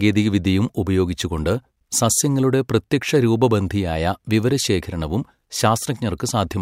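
No technical faults are audible anywhere in the speech.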